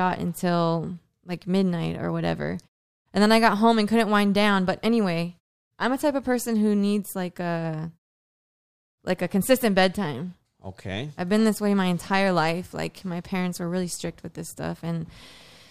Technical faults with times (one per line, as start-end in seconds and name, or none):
none